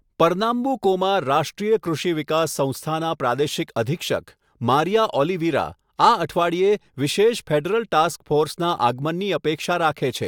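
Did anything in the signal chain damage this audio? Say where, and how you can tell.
No, nothing in the signal chain has damaged this speech recording. No stage from capture through to playback leaves an audible mark on it.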